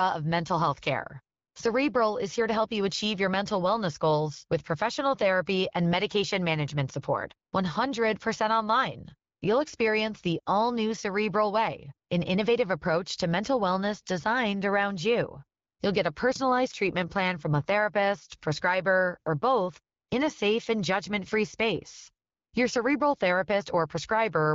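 Nothing in the recording stood out as a technical fault on listening.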